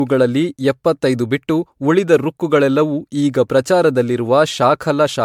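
Speech, and generation loss runs through the whole clip: it sounds more swirly, smeared and hollow than a single MP3 encode at this quality would, with consonant onsets blurred rather than crisp. The likely cause is repeated MP3 decoding and re-encoding, around seven times, at rates that point to roughly 100 kbit/s, each pass requantising on a shifted frame grid so noise and spectral holes accumulate. Content stops at about 20.1 kHz.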